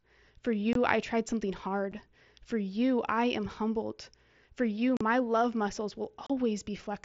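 At 0.73 s the speech drops out for about 22.5 ms, ending at 0.76 s. This is unconcealed Bluetooth headset packet loss. Voice packets between headset and phone never arrived, and nothing filled the gap. A single 7.5 ms hole follows at 1.92 s. Longer gaps come from 4.97 to 5.01 s and from 6.27 to 6.30 s. Each hole has hard edges and can click. The lengths fit runs of 7.5 ms packets on an mSBC link, whose light grainy noise rides on loud sounds.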